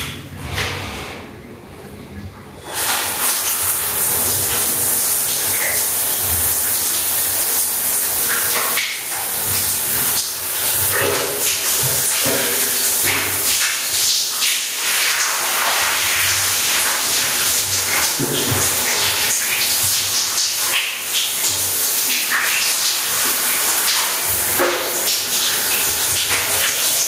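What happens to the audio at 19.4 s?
At 19.4 s, as throughout, gain pumping: input gain likely set far too high lets a fast limiter clamp each loud sound, so the gain swings by about 15 dB.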